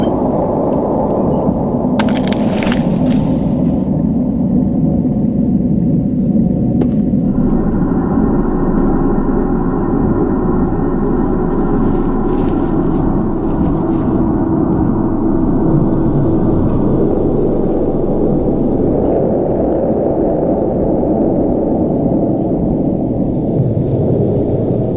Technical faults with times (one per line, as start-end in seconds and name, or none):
none